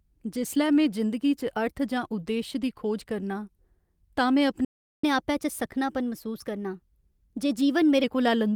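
A speech recording whose flow breaks at 4.65 s: the sound cuts out and stays silent until 5.04 s, a gap of about 0.39 s, and then resumes. This is a playback stall, most likely the player running dry of buffered data or its output thread being held up, so nothing reaches the output. On a waveform it is a flat line with no decay tail; a spectrogram shows a clean vertical band of empty time across all frequencies. From 5.04 s to 8.04 s the speech runs at 1.1 times normal speed, with pitch raised by about a semitone and a half, before settling back to normal. That is catch-up at higher speed: the player resamples its backlog to recover the time lost in the stall, which shortens the sound and lifts its pitch together. On a spectrogram the harmonic lines sit visibly higher and syllable spacing is compressed across that stretch, then drop back at 8.04 s. The Opus coding, which carries content up to roughly 20 kHz, shows only light wear.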